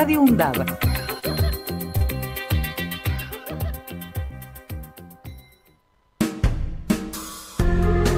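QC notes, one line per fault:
1.19–1.24 s, 1.98–2.03 s and 4.27–4.32 s, short concealed packet loss: brief smears or wobbles, each about 50 ms long. Chunks of audio, 20, 20 and 40 ms, arrived too late, and the receiver covered each gap with roughly 30 ms of extrapolated sound before crossfading back.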